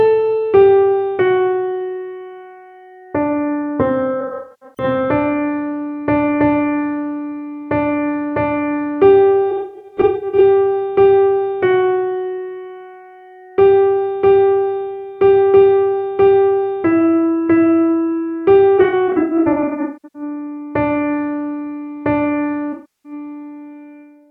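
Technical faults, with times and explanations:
4.21–4.84 s, 9.50–10.41 s, 18.78–20.22 s and 22.72–23.12 s: AAC frame loss with concealment. Losses of about 0.41, 0.53, 0.77 and 0.32 s, the first three scattered across their span, with runs up to about 150–200 ms. The decoder rebuilds each gap from the last good spectrum, so the sound turns smeared, noisy or phasey rather than dropping to clean silence or clicking, which sets it apart from a plain dropout.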